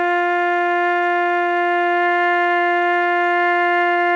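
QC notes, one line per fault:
2.30–2.34 s, 2.90–2.94 s and 2.98–3.02 s: short concealed packet loss. Each is a brief smear or wobble in the music. About 20 ms of audio failed to arrive in time, so the receiver extended the preceding sound to cover 26 ms, 20 ms and 20 ms respectively, then blended back into the real signal.
3.24–3.28 s: short stall from a late packet. The music hangs on slightly too long with a slight buzz or dip, though nothing is lost. A late packet emptied the jitter buffer, so the receiver stretched the last sound by 17 ms and then resumed exactly where it stopped.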